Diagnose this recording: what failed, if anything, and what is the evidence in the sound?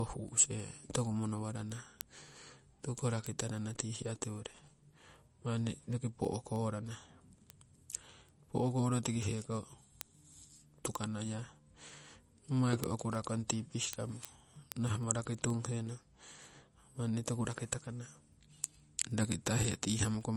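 Codec stage: the speech has a watery swirl throughout and nothing above 12.1 kHz, likely MP3 compression at a starved bitrate, something like 40 kbps.

Converter or digital input: word clock ticks, sharp and uneven, roughly every 0.15 s from 0.13 s to the end. The unlocked clocks slip about 150 ppm, dropping or repeating one sample each time.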